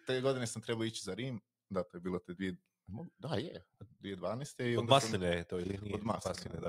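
Noise suppressor applied to music or sounds, throughout: a speech-tuned suppressor treats sustained content as noise, so the level pumps by roughly 5 dB as held sound and tails are pulled down.

Sound cut by the noise suppressor, 3.63 to 4.03 s: here the suppressor misjudges the sound as noise, dropping it by about 19 dB for roughly a third of a second.

Overlap-add ripple, 5.64 s to the end: frames are rejoined with mismatched overlap gain, so the level dips about 11 dB around 30 times per second, a rough, fast flutter.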